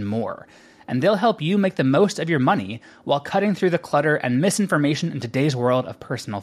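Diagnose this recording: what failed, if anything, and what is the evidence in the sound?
Nothing failed; no stage of the recording shows a problem.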